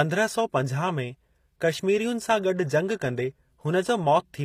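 Speech, with plainly audible HE-AAC compression throughout: the treble stays bright but sounds synthetic, with gritty, lispy s sounds whose harmonics don't line up. Unlike a plain low-pass, the highs are present but copied upward from lower bands, likely from a low bitrate around 24 kbps.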